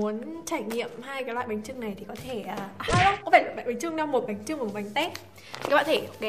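A single burst of damaged data in a compressed stream sits at about 4.27 s, where the sound gives way to a short glitch lasting about 16 ms. Corrupted bytes there cause the decoder to misread the frame, lose sync and hunt for the next valid header. Unlike a plain dropout or a click from an analogue fault, the cause lies in the coded data rather than in the audio signal itself.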